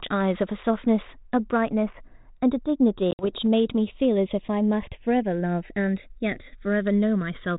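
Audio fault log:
Throughout: channels drifting apart. The two sides run on slightly different clocks, about 100 ppm off, so the gap creeps toward roughly 0.7 ms and mono sounds slowly flanged.
3.11 to 3.32 s: packet loss on an ADPCM call. About 70 ms drops to hard silence, longest gap 60 ms, then the decoder's predictor restarts mistracked, giving a slightly distorted return on this 32 kbit/s G.726 sound.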